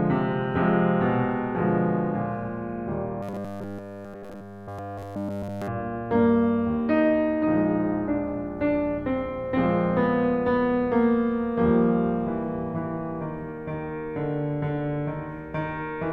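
From 3.23 to 5.68 s, new audio likely stopped arriving in time, so the player kept looping a short buffer of about 10 ms while the real music was skipped. Nearly the whole stretch is repeats, producing robotic sound from repeated short buffers: a rigid, metallic 100 Hz buzz.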